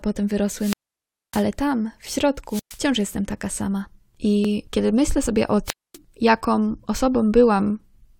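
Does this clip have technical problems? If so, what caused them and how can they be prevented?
Yes. Wireless microphone squelch dropout occurs at 0.56–1.47 s (about 605 ms muted, before "tam w"), 2.47–2.80 s (about 117 ms) and 5.65–5.97 s (about 245 ms, after "kiedy myślę sobie o"). The FM link fades, hiss briefly rises, then the receiver's squelch mutes everything, leaving flat, empty gaps on the waveform and spectrogram. Keep transmitter-to-receiver line of sight, fresh batteries and properly placed antennas.

An overlap between stream segments at 4.45 s, just before "kiedy myślę sobie o", trims a sliver of overlapping audio, so the waveform jumps, consistent with a 6 s segment boundary. Correct segment timestamps so consecutive segments don't overlap.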